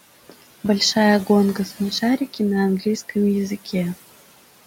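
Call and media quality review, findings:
Noise suppressor artifacts, throughout. Room noise, sitting about 19 dB under speech, is pulled down about 17 dB between phrases and returns under speech. The spectrogram shows a noise floor gating on and off with speech.

Loose connector crackle, 0.42 to 0.68 s. Irregular scratchy burst, probably from a worn or dirty contact making and breaking as it moves. The waveform shows a cluster of sharp spikes, and the spectrogram shows thin broadband vertical streaks over that quarter second.

Speech cut by the noise suppressor, 1.55 to 2.02 s and 2.18 to 2.40 s. The suppressor misread soft speech as noise. Roughly a tenth of a second within each span drops, up to about 8 dB and about 11 dB, so parts sound swallowed. The waveform shows a dip in the envelope, and the spectrogram shows faded speech energy.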